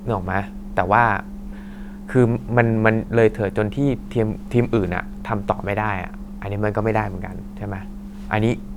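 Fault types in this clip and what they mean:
No technical faults can be heard anywhere in the speech recording, which keeps an unbroken signal throughout.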